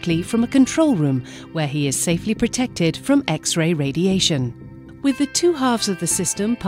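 Nothing in the audio stood out as a technical fault on listening.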